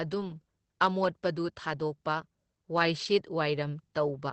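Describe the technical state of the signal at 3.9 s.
At 3.9 s the speech carries Opus voice compression, present throughout the clip. The linear-prediction coder keeps the band to about 8 kHz and codes excitation coarsely. That fits a bitrate near 12 kbps. The voice sounds muffled, hoarse and slightly robotic.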